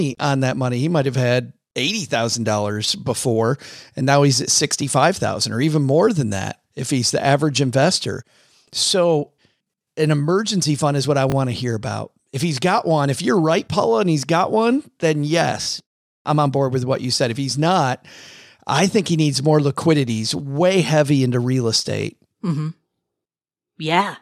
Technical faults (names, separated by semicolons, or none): repeated buffer